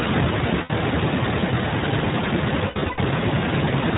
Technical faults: iLBC codec; lost iLBC frames

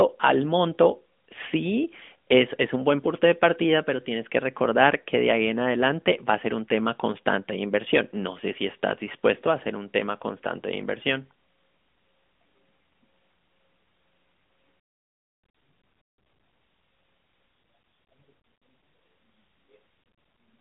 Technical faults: none

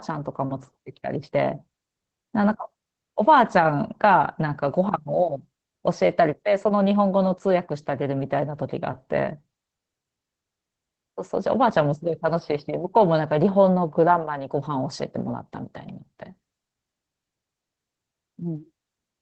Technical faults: Opus voice compression

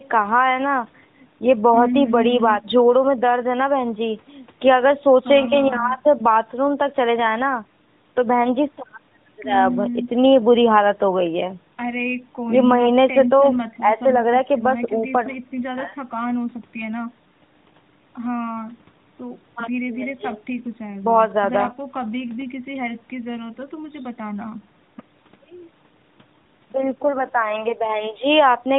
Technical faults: none

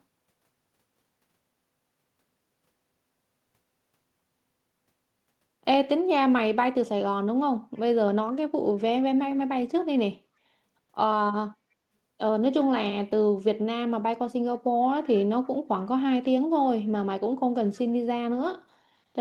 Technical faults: echo leak

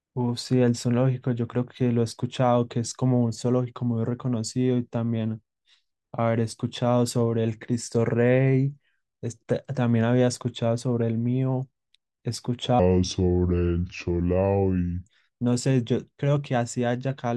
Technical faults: section at the wrong speed

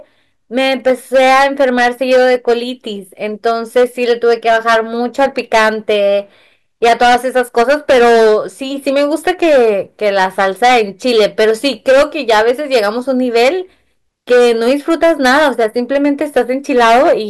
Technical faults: hard clipping

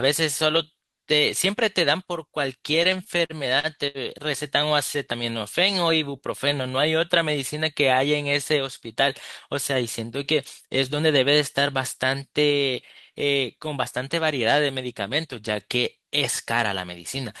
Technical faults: repeated stalls (stutter)

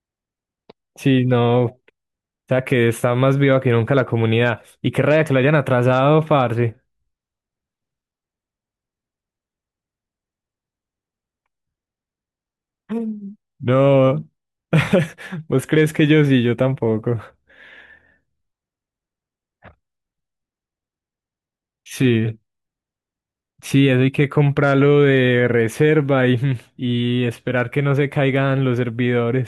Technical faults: none

